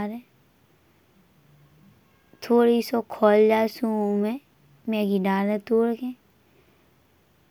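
No technical faults can be heard.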